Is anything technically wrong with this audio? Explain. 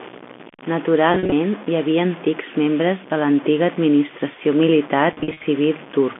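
Yes. The speech carries two faults, heard against the narrow band of a working G.711 A-law telephone line.

Low bit depth without dither runs through the whole clip: quiet passages turn gritty and coarse, with grainy distortion about 20 dB below the speech that tracks its level. The likely cause is truncation to very few bits, around five, with no dither. On a waveform, quiet stretches look like visible stair steps. On a spectrogram, broadband noise rises and falls with each syllable.

Packet loss with pitch repetition occurs at 1.12 to 1.32 s, just before "hi havia antics membres", and at 5.13 to 5.47 s, just after "de l'antiga administració militar". In the first, about 130 ms of audio is lost, scattered across 200 ms. In the second, about 210 ms is lost across 340 ms. The longest gaps are 40 ms and 50 ms. The receiver bridged each gap by repeating the last pitch period, which sounds like brief buzzy, held stutters. 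A spectrogram shows frozen harmonic stripes, and the waveform shows identical repeating cycles.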